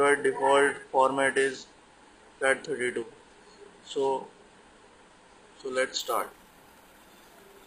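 From the start to 6.0 s the audio shows an adaptive stream starting at a low bitrate: the player opened on a lean rendition to begin playback quickly, then switched to a better one after measuring the connection. During that opening stretch nothing reaches above about 9.7 kHz, the top sounds dull, and coding artefacts are more noticeable, which points to roughly 32 kbit/s AAC. At 6.0 s the treble returns abruptly with no gap, consistent with a step up to around 96 kbit/s.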